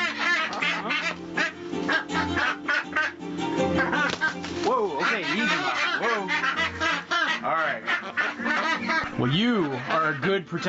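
Gain pumping runs throughout: the level swings by around 15 dB, likely from over-high input gain caught by a fast limiter. The waveform's envelope looks squashed and uneven. The spectrogram shows nothing above 8 kHz, which reflects the call path's bandwidth.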